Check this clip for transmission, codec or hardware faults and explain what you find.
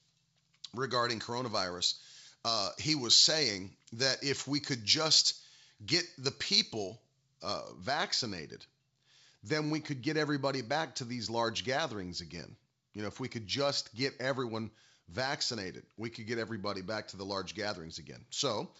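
There's one fault, right at the start, heard through G.722 wideband coding at 64 kbit/s. From 0.0 to 7.73 s there's pre-emphasis left on: a treble lift fitting the 75 µs FM curve was never undone, so 10 kHz sits about 13 dB hot relative to 1 kHz. The speech comes across thin, bright and sharply sibilant.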